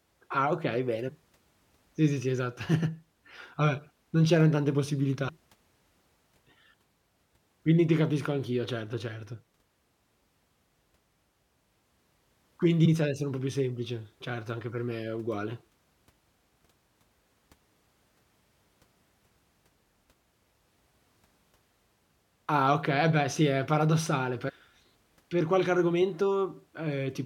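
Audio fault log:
1.07–1.09 s, 5.27–5.30 s, 12.84–12.86 s, 24.48–24.50 s: damaged data in a compressed stream. Each is a brief glitch lasting about 20 ms, heard after "okay bene", "c'eran tante possibilità" and "beh sì è paradossale". Corrupt bytes make the decoder misread frames and lose sync until it finds the next frame header.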